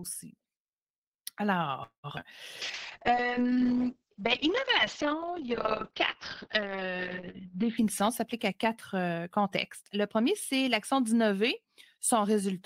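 At 1.83 s the speech stops moving forward. This is a call audio freeze. Packets were likely held up in transit, and the jitter buffer ran dry. The receiver stretched the last sound to cover the wait. That filler fades out, and about 110 ms of it is plain silence. Speech resumes at 2.06 s from where it stopped. Nothing is lost. About 203 ms of dead time has been inserted.

Two short concealed packet losses follow, from 2.10 to 2.12 s and from 2.20 to 2.24 s. Each time, 20 ms of audio never reached the decoder. The receiver patched the hole by extending the preceding sound, then blended back into real audio. Each patch sounds like a quick smear or wobble. A brief sound inside either gap could disappear.

Between those two patches there is a skip ahead, at 2.16 to 2.18 s. Roughly 70 ms of speech is dropped, while later audio was already waiting. Playback jumps forward with almost no gap. The two sides are spliced nearly directly. 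The jump also gives back part of the delay the freeze added.

From 2.62 to 7.83 s there is a call bitrate drop. The encoder's rate falls from 32 kbps to 6 kbps and stays at the bottom for about 5 s. Audio bandwidth shrinks from 20 kHz to 6 kHz. The speech loses its top end and sounds muffled. Coarser coding adds a rough, watery texture. Quality returns near 7.8 s.

Inside that stretch, from 3.10 to 3.79 s, comes a jitter buffer slow-down. The buffer needed a bigger reserve. The receiver repeated single pitch periods and slivers of pause over and over. Playback runs at 88% speed, adding 90 ms. Pitch stays the same. Sounds are drawn out.

From 7.48 to 9.84 s there is a jitter buffer speed-up. The buffer now held more audio than its target. The receiver trimmed short chunks, one or a few pitch periods each, many times in a row. Speech runs at 109% speed at unchanged pitch. About a fifth of a second is removed. 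The delivery sounds hurried. This overlaps the end of the low-bitrate stretch.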